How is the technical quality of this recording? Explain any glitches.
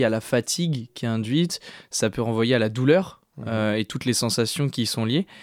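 No technical glitches are audible in this recording.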